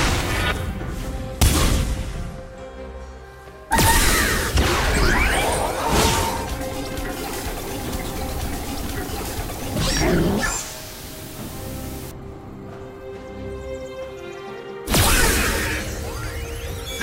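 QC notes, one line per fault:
7.13 to 12.11 s, low bit depth with dither: the audio drops to 6 bits, and dither turns the rounding error into a steady, even hiss about 15 dB below the signal, with no distortion. A spectrogram shows a flat noise floor across all frequencies in that span, and the waveform's quiet parts look thickened.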